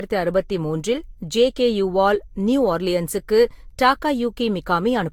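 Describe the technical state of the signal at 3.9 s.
At 3.9 s the speech carries generation loss, present across the whole clip rather than at that moment alone. The sound is swirly, hollow and smeared, with consonant attacks blurred, which likely comes from several successive lossy passes, fitting a Vorbis chain near 70 kbit/s, each requantising on a shifted frame grid. On a spectrogram, content stops sharply near 19.4 kHz, with patchy holes and speckled noise between harmonics; the waveform shows softened transient edges.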